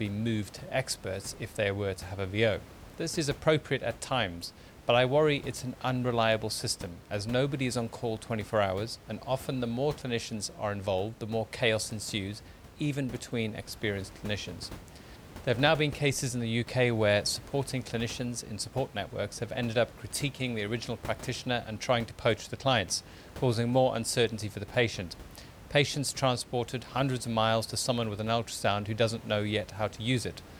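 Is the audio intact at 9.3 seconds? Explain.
Yes, the speech is intact at 9.3 s, with only the room's own background noise audible about 19 dB below it.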